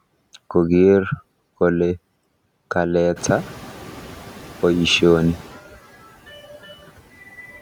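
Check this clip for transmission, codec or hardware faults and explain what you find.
One fault turns up in the speech: noise suppressor catching up. From 3.16 to 3.92 s, after the room noise jumps by about 15 dB at around 3 s, the noise passes through with little reduction, then sinks by about 4 dB. The suppressor's noise estimate lagged that sudden rise and took 760 ms to adapt.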